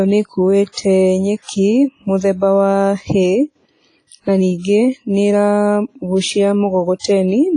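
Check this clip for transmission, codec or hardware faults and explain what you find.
The speech carries codec damage throughout, plus one pre-echo event near the end.

WMA compression: Across the whole clip the audio sounds heavily processed. It rings, washes and has a hiss that rises and falls with the signal, and nothing is present above 10.5 kHz. This is likely the result of a WMA 1 transform codec running at a low bitrate, consistent with about 24 kbps. A simple encoder using long blocks lets quantisation noise smear over tens of milliseconds, and the starved bit budget zeroes weaker spectral lines. This accounts for the ringing, washy texture and the missing top end.

Pre-echo: From 6.99 to 7.04 s, just after "na ningĩ nĩ ĩragucia", a short hiss of about 50 ms arrives ahead of a sharp onset, which then sounds softened and smeared. The attack falls late within a transform block. The block's quantisation noise is sized for that loud attack but is spread evenly across the entire block, so it also fills the quiet stretch before the onset.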